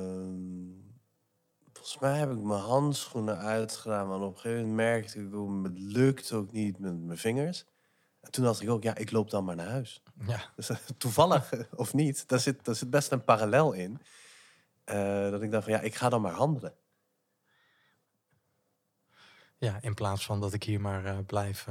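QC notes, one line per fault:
0.0–7.1 s, time-stretched section: the opening stretch of speech runs at roughly 0.61 times its natural pace while its pitch stays unchanged, then returns to normal speed abruptly at 7.1 s. The slowed portion drags, because short grains of the waveform are repeated to fill the extra duration. The likely cause is software lengthening this section to fit a target timing while preserving pitch.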